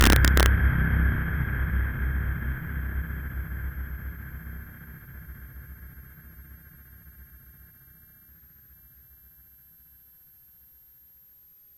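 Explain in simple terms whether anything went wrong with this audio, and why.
Yes, two things went wrong. A switching power supply somewhere in the chain was running at a frequency people can hear. That puts a switching supply whistle over the whole clip, a faint, very high tone wandering around 12.6 to 13.1 kHz.

At the very start, from 0.01 to 0.46 s, the loudest parts went past the largest number the system could store. Instead of being held at the limit, they wrapped around to the opposite extreme. This integer overflow turns those peaks into harsh, violent cracks, far sharper than ordinary distortion.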